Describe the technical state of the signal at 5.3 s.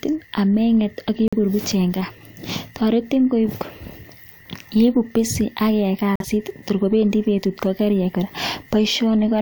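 At 5.3 s the speech signal is intact, with no audible dropout, distortion, clipping or other technical fault.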